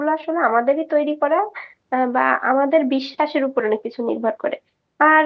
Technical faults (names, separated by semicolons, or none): none